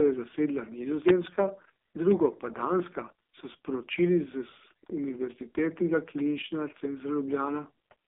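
A speech recording, heard through a thin, boxy telephone band from about 250 Hz to 3.6 kHz with nothing at all above 3.7 kHz, and the voice has a buzzy, synthetic, grainy quality for the whole clip. That is the AMR narrowband mobile codec. It samples at 8 kHz and rebuilds the voice from a vocal-tract model fed by a few pulses per slice of each frame. The heavy damage points to one of its lowest modes, around 5 kbps.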